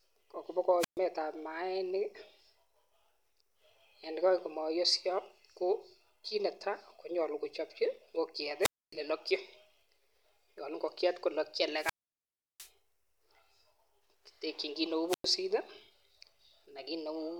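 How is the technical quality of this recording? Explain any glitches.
The recording is marred by four wireless microphone squelch dropouts. They fall at 0.79 to 0.99 s, 8.60 to 8.94 s, 11.75 to 12.71 s and 15.08 to 15.26 s. Each time, the radio signal from the transmitter fades. Hiss rises briefly. Then the receiver's squelch mutes the output. The silent holes last 127, 263, 704 and 103 ms. The longest, near 12 s, leaves a hole of about 0.7 s before the voice returns.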